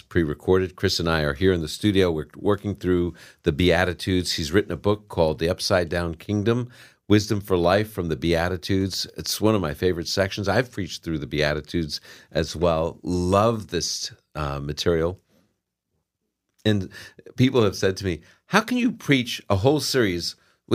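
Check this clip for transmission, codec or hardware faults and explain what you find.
No faults found in this recording.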